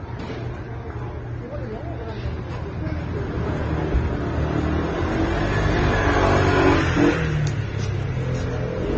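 Everyday sounds here, and the whole clip carries a layered lossy-codec smear: nothing survives above 8 kHz, and two different artefact flavours sit on top of each other. That points to transcoding between lossy codecs, most likely a low-rate AAC pass re-encoded to Opus, both around 24 kbit/s. The second encoder burns its bits reproducing the first one's damage, adds its own, and the 8 kHz ceiling simply carries through.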